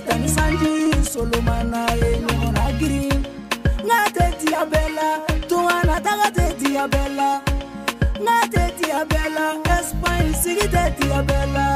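There are no technical faults to describe in time order.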